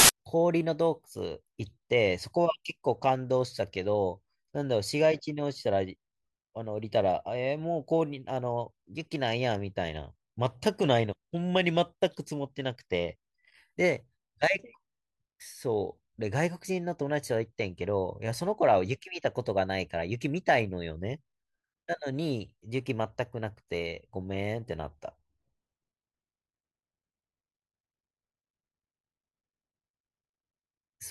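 The clip opens with file tags played as audio, from 0.00 to 0.09 s. An embedded cover picture, stored as compressed data, is decoded as if it were samples, so its near-random bytes come out as a burst of very loud white noise before the speech starts. It sounds like a sharp hiss of static with abrupt edges. On a waveform it is a solid, dense block of large-amplitude noise, and on a spectrogram a flat, uniformly bright band covering all frequencies, starting and stopping with vertical edges.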